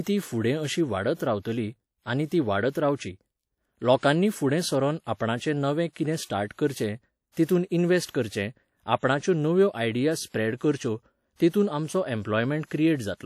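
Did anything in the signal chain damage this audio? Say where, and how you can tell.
Yes, at the codec stage. The whole speech clip has a ringing, washy quality with hiss that swells and fades with the talker, and the top stays intact up to about 20.1 kHz. That's likely WMA compression; its long transform blocks smear quantisation noise, and the damage fits roughly 48 kbps.

There's also pre-echo around 7.45 to 7.49 s. A sharp onset sits late in a transform block, so the noise meant for the loud part leaks into the quiet 41 ms before it. You hear a brief hiss, then a softened attack.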